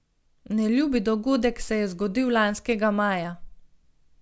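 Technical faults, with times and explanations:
Throughout: aliasing. The audio was resampled to 16 kHz without an anti-alias filter, so content above 8 kHz folds back as gritty, unrelated tones, about 30 dB down. Unlike plain band-limiting, the spectrum stays full up to the edge.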